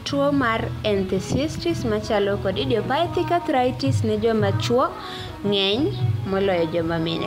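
Nothing goes wrong anywhere in this speech recording; there's simply no technical fault to point to.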